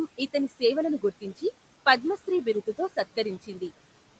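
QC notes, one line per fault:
Throughout: noise suppressor artifacts. The suppressor treats the room's steady background, which sits about 17 dB below the speech, as noise to remove and pulls it down by about 18 dB in every band it judges noisy, frame by frame. As a result, the background sinks to near silence in the gaps and swells back up under the speech. The call codec's band limit leaves nothing above 8 kHz.
1.0 to 1.43 s: speech cut by the noise suppressor. Just after "ఇతని సేవలను" and before "పద్మశ్రీ బిరుదు తో", the suppressor mistakes quieter parts of the speech for background and turns them down with the noise, by as much as about 14 dB at the deepest point. Only about a tenth of a second within this span is affected, so the softer sounds there come across as swallowed or faint rather than fully dropped.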